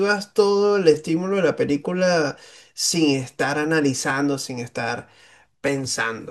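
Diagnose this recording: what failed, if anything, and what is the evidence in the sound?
Four clicks spaced 1.58 s apart, 0.94 to 5.68 s: likely clock drift buffer slips at the buffer, each dropping or repeating a few dozen samples. Random dropouts wouldn't be this regular.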